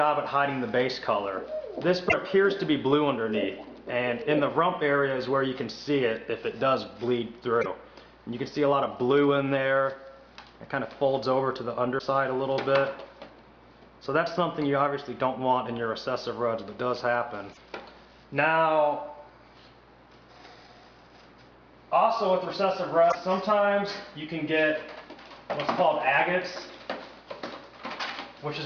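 Damaged data in a compressed stream causes brief chirps, squawks, clicks or short holes at 2.05, 7.59, 11.95, 17.49 and 23.08 s, each 55 to 85 ms long. The decoder misreads corrupted frames, then resyncs.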